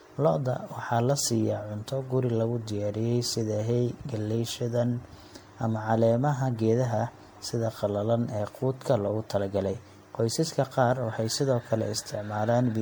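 From start to finish the speech sounds swirly, hollow and smeared, with blurred consonant attacks. That's generation loss, likely from roughly ten MP3 re-encodes, each quantising on a shifted frame grid so noise and spectral holes pile up. It fits a 96 kbit/s chain.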